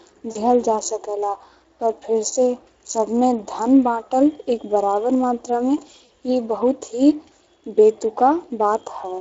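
The clip is speech carried through the Speex codec throughout, and the coding damage is plainly audible. As a CELP coder short of bits for its excitation, it leaves the voice with a noisy, hoarse grain, which fits a bitrate of around 20 kbps. That rough texture riding on the voice itself sets it apart from the swirly, metallic warble of transform codecs such as MP3. There are also two short events of VoIP packet loss concealed by the speech codec, at 0.31–0.38 s and at 6.05–6.10 s, each suggesting about 40 ms of missing audio, or roughly two lost frames. Instead of a silent gap or a hard click, as a plain dropout would give, the decoder stretches its last pitch and filter state into a brief buzzy tone or coloured noise that fades. The voice then sounds weak and smeared for a moment after packets resume.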